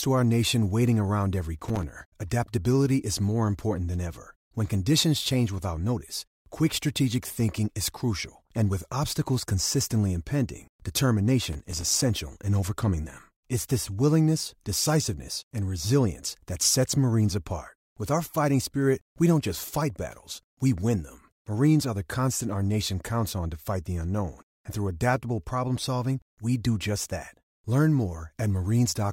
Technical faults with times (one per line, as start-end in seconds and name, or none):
1.59-1.83 processor overload crackle
11.53-12.02 processor overload crackle